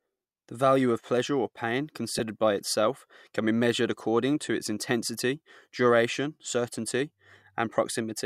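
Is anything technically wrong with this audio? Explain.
Yes. There are two brief instances of lost LE Audio frames, at about 2.19 s and 7.75 s in the speech. Each gap lasts about 10 ms, consistent with one dropped frame of the Bluetooth LE Audio stream. The LC3 decoder covered each gap by reusing the previous frame's spectrum with randomised signs. That keeps the energy but scrambles the phase, so each gap sounds like a short, grainy smear of noise where the sound briefly turns rough.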